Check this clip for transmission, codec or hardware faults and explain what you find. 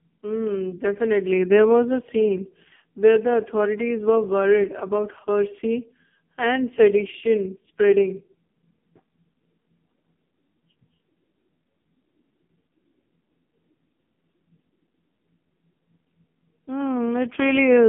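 The whole clip has one fault: the AMR narrowband mobile codec, applied heavily from start to finish. The speech sits in a 150 Hz to 3.4 kHz line band with nothing above 3.4 kHz. The codec rebuilds the voice from a vocal-tract model driven by sparse pulses, and the heavy damage fits the lowest AMR-NB mode of about 4.75 kbps. That leaves a buzzy, synthetic timbre. A simple telephone band-pass filter would narrow the sound without that artificial buzz.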